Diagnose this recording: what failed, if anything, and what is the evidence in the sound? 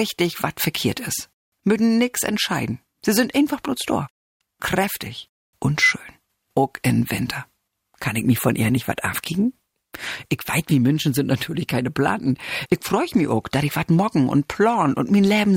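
A call bitrate drop runs from 8.06 s to 13.67 s, a network-driven fault at the codec stage. The bandwidth estimate sank, so the encoder was forced onto a much smaller bit budget. The audio turns coarse and watery, with the top end rolled away, and is worst for about 3.5 s. That texture fits a fall from roughly 128 kbps to about 25 kbps. The sound regains its detail as the bitrate climbs back.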